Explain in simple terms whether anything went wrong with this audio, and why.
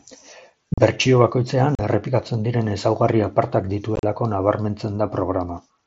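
Unconcealed Bluetooth headset packet loss: the link between headset and phone dropped voice packets, leaving short, abrupt gaps in the speech at 0.74, 1.75 and 3.96 to 4.03 seconds, the last one choppy.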